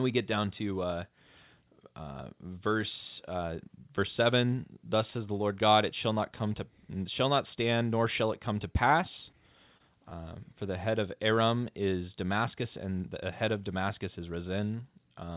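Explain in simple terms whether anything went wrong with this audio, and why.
Two tiny glitches are short concealed packet loss. At 9.77 to 9.82 s, right after "it come to pass", and 10.10 to 10.13 s, just before "for the head of", bits of speech arrived late. The receiver stretched the previous sound to cover each gap, causing a quick smear. The phone-style call codec also drops everything above 4 kHz, so the speech sounds narrow.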